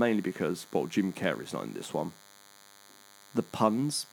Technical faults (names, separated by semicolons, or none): DECT cordless phone buzz